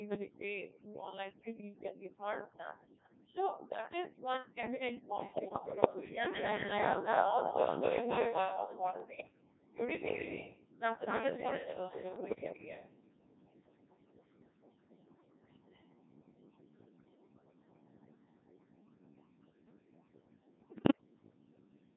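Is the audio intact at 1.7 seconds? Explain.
No. At 1.7 seconds the speech carries two faults that run through the whole clip.

The first is overdone noise removal. The noise reducer was set so aggressively that it pushes individual frequency bands down to nothing whenever they sit close to its noise estimate, and the softer parts of the speech go with them. The background drops to near silence dotted with twinkling specks. Those isolated chirps in otherwise dead gaps separate it from plain low-pass dullness or heavy compression, which leave the noise floor steady.

The second is the Codec 2 vocoder, with heavy damage. Instead of preserving the waveform, it transmits only pitch, voicing, energy and a coarse spectral shape, and the decoder rebuilds the speech from sine waves. The result is a robotic, buzzy tone, at a quality that fits a rate around 1.6 kbit/s. Unlike ordinary low-bitrate codec smearing, the whole timbre is synthetic and mechanical rather than just blurred.

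The lowest bass is taken out by the call's microphone processing, which is normal.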